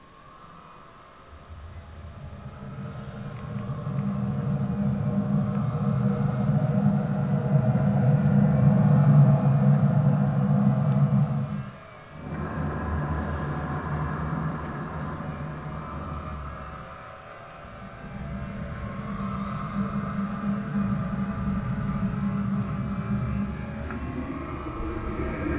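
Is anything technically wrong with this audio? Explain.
No, nothing here stands out as a technical problem; this recording of sounds comes across just as you'd hope, with nothing jumping out that needs fixing.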